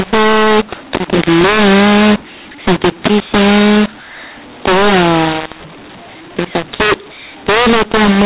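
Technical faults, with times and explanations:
Throughout, mu-law and A-law mixed up: mu-law telephone speech decoded as A-law scrambles levels unevenly, giving harsh distortion and noise-filled pauses, unlike clipping, which only flattens peaks.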